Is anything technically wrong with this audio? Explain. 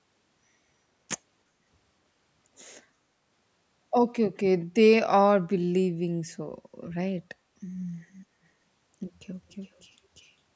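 Yes. Near the end, from 9.51 to 9.82 s, a faint echo leak appears: a delayed copy of the speech returns about 398 ms after the original, sitting far below it, roughly 40 dB down. The likely cause is a loudspeaker on one side of the call whose echo canceller let some of its microphone pickup through and sent it back. It sounds like a ghostly trailing repeat. On a spectrogram, a weak duplicate of the preceding speech pattern appears shifted about 0.4 s later. The waveform barely shows it. The call's microphone processing, with nothing above 8 kHz, is ordinary.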